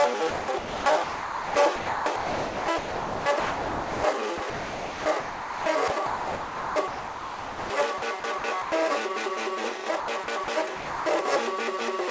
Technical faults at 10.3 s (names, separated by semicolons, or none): sound chopped by the voice detector